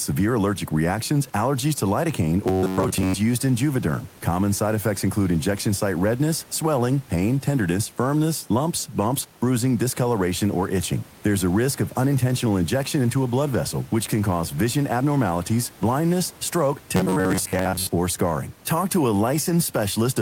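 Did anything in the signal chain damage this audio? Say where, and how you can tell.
Yes. From 2.45 to 3.14 s and 16.96 to 17.87 s the speech turns into a rigid metallic buzz pinned near 94 Hz: robotic sound from repeated short buffers, likely at the driver or buffer stage. A fragment of roughly 10.7 ms is being replayed, replacing most of the real audio.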